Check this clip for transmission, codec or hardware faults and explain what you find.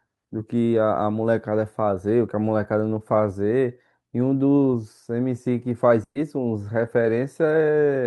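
One transmission fault turns up, a burst of packet loss from 6.03 to 6.17 s. About 120 ms of speech never arrived in time to play. The receiver covered the gap by extending the last sound it had and letting it decay. The fill lasts about 120 ms, and part of it fades to silence, about 70 ms. A voiced sound becomes a brief held buzz, and an unvoiced one becomes a thinning hiss. Speech then resumes slightly further along, with that stretch missing.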